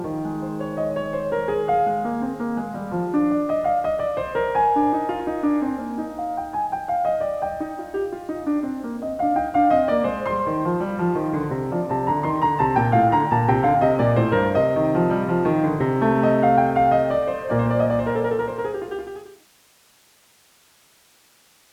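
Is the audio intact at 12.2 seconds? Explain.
Yes, the music is intact at 12.2 seconds, with no fault at that point.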